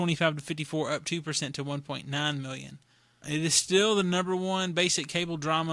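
Listening through the speech, nothing stood out as a technical fault at any point.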